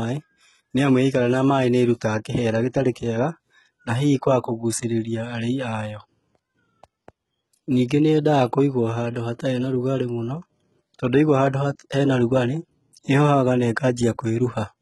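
Throughout the speech, the upper spectrum sounds synthetic rather than captured, and nothing is present above 11.8 kHz. This is likely HE-AAC compression under heavy strain, consistent with a very low bitrate around 16 kbps. The codec keeps only the lower band and regenerates the treble by spectral band replication, copying lower content upward under a coarse envelope. Because those copied harmonics do not align with the real ones, s sounds come across gritty, metallic or lispy.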